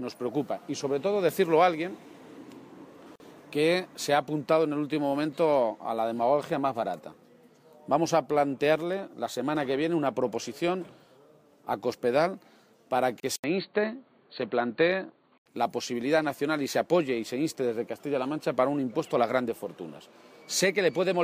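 Separately encoded pieces were joined without trimming the encoder's start delay and end padding, leaving a gap at a join of encoded pieces: a 45 ms silence from 3.16 to 3.2 s and a 31 ms one from 13.2 to 13.23 s, ten seconds apart, with smeared edges before the sound resumes where it stopped.

At 13.36 s the input likely switched to a poorer device. An 80 ms silence opens, then until 15.46 s the sound turns dull and boxy, with nothing above 4.5 kHz, a faint new noise floor far below the signal, and much the same level.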